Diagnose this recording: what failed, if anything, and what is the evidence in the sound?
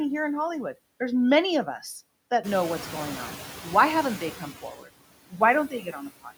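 Noise suppressor artifacts run through the whole clip, a call-processing fault. The suppressor pulls down the bands it judges to be steady noise by about 20 dB, frame by frame, so the background sinks in the gaps and swells back under the speech.

Noise suppressor catching up appears from 2.43 to 3.44 s, again in call processing. The room noise, which is part of the recording, jumps by about 15 dB at around 2.5 s and then sits roughly 13 dB below the speech. The suppressor's noise estimate trails that jump, so for about a second the louder background comes through with only about 6 dB of reduction before the estimate adapts and the noise drops away.

Speech cut by the noise suppressor occurs at 4.62 to 4.89 s, 5.30 to 5.41 s and 5.68 to 6.32 s, also in call processing. The suppressor mistakes quieter parts of the speech for noise and turns them down with it: by about 12 dB, about 16 dB and about 15 dB at the deepest. 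Roughly a tenth to about four tenths of a second of speech in each stretch sounds swallowed or faint.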